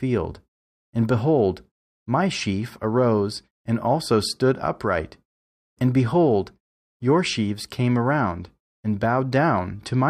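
No technical faults turn up anywhere in this speech recording, so there's nothing here to walk through.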